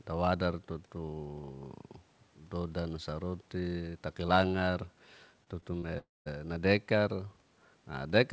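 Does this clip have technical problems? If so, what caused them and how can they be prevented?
Yes. Around 5.44 to 5.48 s, 5.60 to 5.64 s and 5.80 to 5.84 s there's short concealed packet loss. Each time about 20 ms of the call didn't reach the decoder in time, so the receiver papered over the gap by stretching the last bit of sound for 25, 13 and 25 ms, then blending back in. You hear it as quick little smears or wobbles, bunched together. A bigger jitter buffer or forward error correction on the sender would prevent most of these.

Right after that, from about 5.98 to 6.28 s, there's a long network dropout. The sound carries on as a fading artificial continuation, then goes quiet for roughly a fifth of a second before the audio returns, with about 280 ms of the original simply gone. The cause is likely a burst of lost or badly delayed packets, probably a brief network stall, right after the smaller losses. 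A more stable connection, such as wired instead of congested Wi-Fi, and redundancy for burst loss would prevent this. The G.722 call path's cutoff at 8 kHz is just how that codec works.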